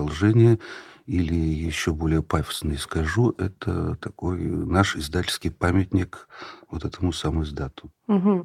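No technical faults can be heard anywhere in the speech.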